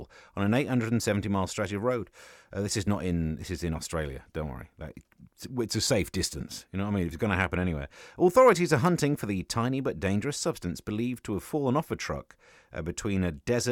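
No technical faults can be heard in this speech.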